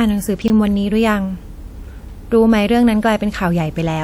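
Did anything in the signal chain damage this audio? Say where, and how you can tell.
Yes. Between 0.42 and 0.50 s the speech jumbles. This is chunks out of order at the buffer stage. One 20 ms chunk plays three chunks late, after audio that should follow it. Nothing is lost, but the sequence breaks at three hard joins.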